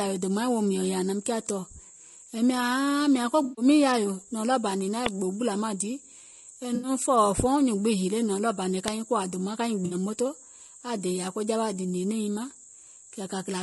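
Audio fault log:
Throughout, low-delay AAC compression: the speech sounds rough and grainy, with a hiss filling the gaps between the harmonics and a thin, synthetic-sounding top end. The likely cause is AAC-ELD, the low-delay codec used for video calls, at a bitrate that fits roughly 32 kbps. Its very short frames can't separate closely spaced harmonics cleanly, and at this rate too few bits are left to code the fine detail accurately.
3.43 to 3.65 s, 6.75 to 6.89 s and 9.85 to 9.95 s, AAC frame loss with concealment: each is a brief smeared, noisy, phasey patch, lasting about 140 ms, 80 ms and 60 ms respectively. Whole coded frames went missing, which fits several 20 ms frames per gap. The decoder rebuilt the gaps from the last good spectrum, so the texture blurs rather than dropping out.
5.06 s and 8.88 s, uninitialised buffer: each is a sudden, loud click of harsh digital noise. A block of memory was played before any audio had been written into it, so leftover values were sent out as samples. 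The first burst is 2.9 ms long, which fits a 128-sample buffer. The second is 0.73 ms, which fits a 32-sample buffer.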